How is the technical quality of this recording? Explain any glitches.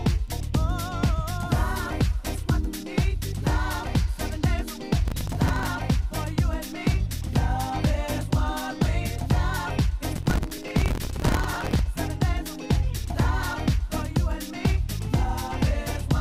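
The recording has two bursts of processor overload crackle, at 5.08 to 5.68 s and at 10.16 to 11.79 s. The second is longer. Missed buffers of a few milliseconds repeat old audio, which sounds like gritty tearing and shows as dense vertical clicks and waveform seams.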